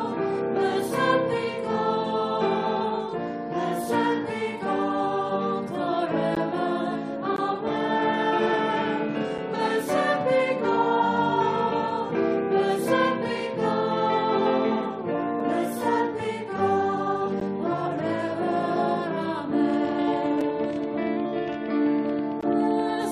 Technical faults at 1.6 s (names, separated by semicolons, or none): none